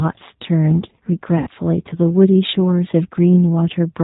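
Throughout, the speech passes through what sounds like the G.729 codec, consistent with about 8 kbit/s, which rebuilds each frame from a vocal tract filter, a pitch predictor and a few pulses. Everything above 4 kHz is gone, and the voice sounds plainly rough and synthetic.

From 1.38 to 1.49 s, a VoIP packet loss concealed by the speech codec occurs. Roughly 90 ms of data went missing, which fits three lost packets. The decoder extended its last pitch and filter at falling gain, so the voice smears into a fading buzzy tone or coloured noise before recovering.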